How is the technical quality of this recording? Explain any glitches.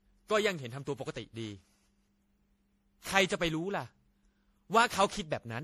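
The technical quality is poor throughout because of generation loss. Across the whole clip the speech sounds swirly, hollow and smeared, with blurred consonant attacks. The likely cause is about ten repeated MP3 passes at around 64 kbit/s, each requantising on a shifted frame grid. A spectrogram would show patchy holes and flickering upper bands, and the waveform would show softened transients.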